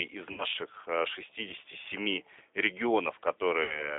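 From start to end the speech carries G.729 codec damage that is plainly audible. The codec rebuilds each 10 ms frame from a vocal tract filter, a pitch predictor and a handful of pulses, so the result sounds rough and synthetic. A spectrogram shows a band running only from about 300 Hz to 3.7 kHz, with nothing above it, and the harmonics look smeared and grainy rather than clean. The 8 kbit/s rate fits G.729A.

VoIP packet loss concealed by the speech codec occurs at 0.32 to 0.44 s and again at 3.63 to 3.97 s. Each time roughly 60 ms of audio goes missing, which fits three lost packets. The decoder extends its last pitch and filter while lowering the gain, so the speech turns into a buzzy tone or coloured noise that fades. Because each frame depends on the one before, the sound stays weak or distorted after packets return, which is why each event lasts longer than the gap itself. On a spectrogram the harmonics freeze into flat, repeating stripes that dim across the gap. 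The waveform shows the envelope sagging and then recovering only gradually.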